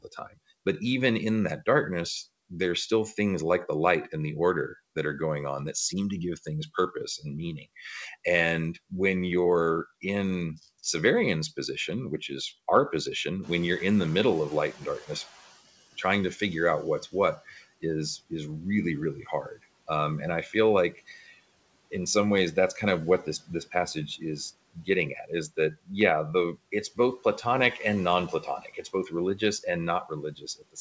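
Right at the start, 0.02 to 0.38 s, speech cut by the noise suppressor: it mistook bits of speech for noise and dipped them by up to about 16 dB.

At 13.42 s the room noise jumps by about 15 dB and the noise suppressor is catching up. Noise leaks through, then sinks by about 12 dB over 2.16 s.

The same speech cut by the suppressor returns at 17.12 to 18.32 s, 19.15 to 19.89 s, 20.46 to 21.33 s, 22.55 to 25.91 s and from 26.55 s to the end, with dips of about 10 to 22 dB. The deepest is in the 22.55 s stretch. Under it all you can hear the G.722 call path's band limit, with nothing above 8 kHz.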